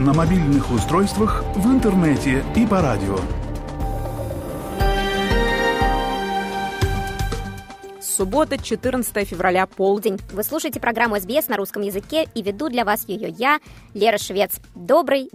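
A playback or editing stage likely ran this last stretch against the wrong clock, producing a section at the wrong speed from 9.97 s to the end. The audio runs 1.16 times faster than it was recorded, and because speed and pitch are tied together here, everything rises by about three semitones at the same moment. The change is abrupt at 9.97 s: the sound turns higher and more hurried, and stays that way through the close.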